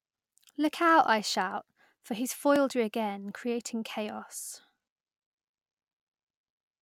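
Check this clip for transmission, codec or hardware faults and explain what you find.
One fault is present: a block of digital silence at 2.56 s, between "I shout for he's" and "you again creating". The output was not supplied with valid samples for about 2.0 ms, so that stretch was written as zeros. The speech drops straight to digital silence and returns with no fade, and the abrupt edges at each end merge into a single short tick rather than an audible gap.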